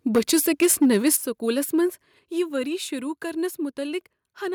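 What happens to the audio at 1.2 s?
Just before 1.2 s, at 1.17 s, the microphone volume steps down. The speech and the background both fall by about 6 dB in a single jump. The likely cause is the call software cutting the input volume after detecting a level that was too hot.

That step follows a stretch of microphone overload from 0.15 s to 1.16 s. The peaks run about 7 dB past the converter's limit, and a few percent of the samples have their tops flattened. This gives the loudest syllables a harsh, crackling edge, most likely from the input volume being set too high.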